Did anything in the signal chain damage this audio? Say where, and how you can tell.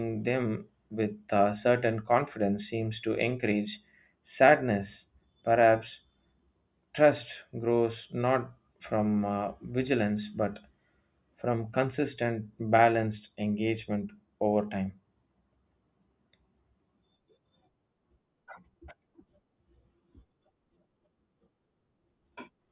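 No, nothing in this recording stood out on listening as damage from any stage of the signal chain.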